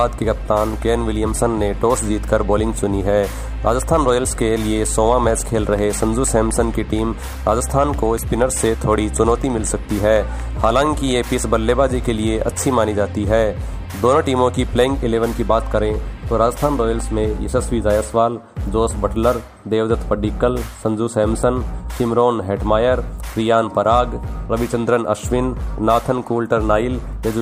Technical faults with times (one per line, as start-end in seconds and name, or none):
5.55-11.12 train of clicks